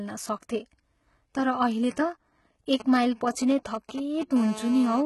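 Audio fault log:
throughout: HE-AAC compression. The treble sounds likely rebuilt rather than carried, and the damage is heavy. Nothing reaches above 11.8 kHz. Below that, a narrow lower band holds the real detail, and the upper band is copied up from it and shaped only by a coarse envelope. The copied harmonics do not line up with the true ones across the crossover. So s sounds turn gritty, metallic or lispy. The sound points to a very low bitrate, around 16 kbps.
2.80 to 4.37 s: GSM signalling bursts. A nearby 2G phone sends short groups of radio bursts while it signals, before a call connects. The audio circuit rectifies those pulses into sound. The result is a galloping dit-dit-dit of short buzzes. Each buzz repeats at 217 Hz, the phone's burst rate. The buzzes come in groups, not as a steady tone. They sit roughly 15 dB below the speech and have no relation to it.
4.37 to 5.01 s: GSM phone buzz. 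At 4.37 s the phone moves into a call and transmits continuously in bursts 217 times a second. The rectified pulses become a hard, raspy buzz at 217 Hz, rich in harmonics. The buzz is nearly steady, unlike the broken groups before it. It sits about 13 dB below the speech, so it is louder than the signalling bursts. It runs to 5.01 s and is unrelated to the speech.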